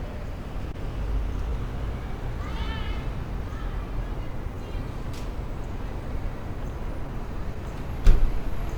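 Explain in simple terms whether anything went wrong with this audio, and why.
A few things went wrong, all about timing.

There's clock drift between sender and receiver throughout. The sending end's clock runs about 2% slow compared with the receiving end's, so audio arrives a touch too slowly and the receiver has to keep compensating the whole way through.

That compensation shows up as repeated timing corrections from about 0.66 s to 8.51 s. The receiver keeps stretching short bits to fill the gap, playing at roughly 98% speed and adding around 150 ms overall. You might hear a slightly unsteady, dragging pace or faint hiccups.

There's also a short stall from a late packet between 0.72 and 0.76 s. A chunk of audio showed up late, so the receiver held the last sound for about 19 ms until it arrived. Nothing is lost, but that moment hangs briefly, maybe with a faint buzz.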